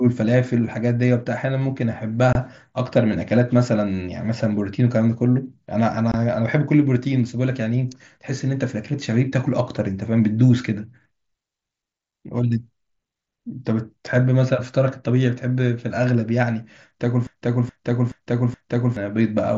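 At 2.33 to 2.35 s and again at 6.12 to 6.14 s, the speech has unconcealed Bluetooth headset packet loss. Each gap lasts about 22.5 ms, which fits three lost 7.5 ms frames. The headset link dropped them and filled the space with silence or an idle pattern instead of patching it over. The result is a short hole with hard edges. That separates it from the gentle flicker of weak upper bands in the mSBC wideband coding, which otherwise carries speech up to 8 kHz.

From 17.27 to 18.97 s, a broken-record loop takes over. A 424 ms fragment plays four times back to back, each copy identical, and the speech that belonged in those seconds never arrives. The likely cause is a stalled player or stream that kept resending its last buffer. Unlike an echo or a stutter, the repeats don't fade or vary. They repeat exactly, each lasting the same length.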